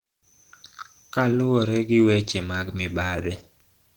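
From start to finish the speech carries plainly audible coding damage that fits Opus compression, likely at a low rate around 16 kbps in the hybrid speech mode. The low band sounds hoarse and muffled, while the upper range, though it extends to about 20 kHz, is filled with grainy, noise-like texture instead of clean detail. This is the encoder rebuilding sparse upper bands from noise and folded energy.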